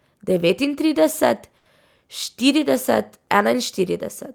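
Speech with a short stall from a late packet at 1.57 to 1.68 s. A packet arrived late, the jitter buffer ran dry, and the receiver stretched the last sound by about 80 ms before resuming. On a spectrogram the harmonics run flat; the waveform shows a repeating cycle.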